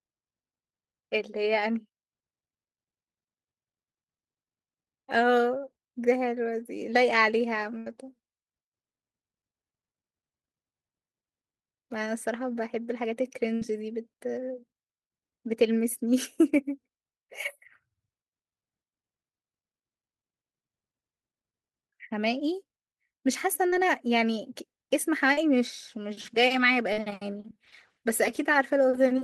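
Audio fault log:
7.78 to 7.87 s and 13.55 to 13.62 s: burst of packet loss. About 80 ms and 60 ms of speech never arrived. The receiver stretched the last sound for 75 ms and 61 ms and faded it, giving a held buzz or hiss. After that the speech jumps ahead with a piece gone. On a spectrogram, frozen, smeared harmonics fade toward silence, then the detail returns abruptly.
23.69 to 23.73 s, 25.33 to 25.38 s and 26.93 to 26.98 s: short concealed packet loss. Gaps of about 30, 40 and 40 ms were patched by extending the preceding sound and blending back in, heard as a brief smear or wobble. In the waveform each shows a short, overly regular stretch. On the spectrogram it is a slight blur.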